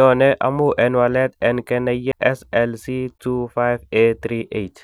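At 2.12 s, just after "amun en walet en", the speech has a CD skip. A knock or a disc flaw threw the laser onto a different turn of the spiral, so the player muted for about 10 ms and resumed from another point in the recording. It sounds like a tiny tick followed by an abrupt discontinuity in the speech. On a waveform this shows as a near-flat gap with hard edges; on a spectrogram, a thin vertical broadband line where the speech pattern breaks and does not line up.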